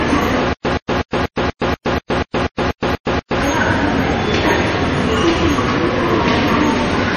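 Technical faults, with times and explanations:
0.53–3.41 s, stutter with silent gaps: a 123 ms burst of the everyday sound repeats twelve times, each followed by about 119 ms of digital silence, a steady 242 ms cycle. This is likely a stalled stream replaying its last fragment. The waveform shows identical blocks separated by flat lines.
Throughout, transcoding between lossy codecs: the audio has the smeared, swirly artefacts of two different low-bitrate codecs layered together, likely MP3 followed by Vorbis, each adding its own damage. On a spectrogram, everything above 14.4 kHz is empty.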